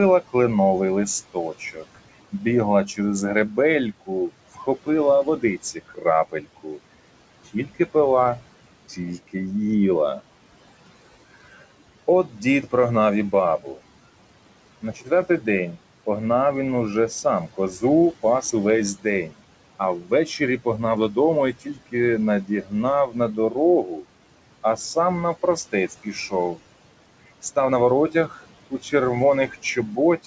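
Right from the start you can hear noise suppressor artifacts: the suppressor is pulling down about 18 dB in every band it decides is steady noise, frame by frame. The room noise, which sits about 18 dB under the speech, drops away in the gaps and swells back under the talking. The 8 kHz top end of the G.722 call path is audible too, but it isn't a fault.

Then there's speech cut by the noise suppressor, where it mistakes parts of the talking for noise and turns them down with the background. Between 1.34 and 7.95 s there's something like 0.7 s of clipped bits, dipping as far as about 16 dB. Shorter bites follow at 8.89–9.35 s, 12.29–13.78 s and 14.82–15.77 s, at about 13–14 dB. From 17.24 s to the end it dips up to about 18 dB, and word endings and soft consonants come out swallowed or faint.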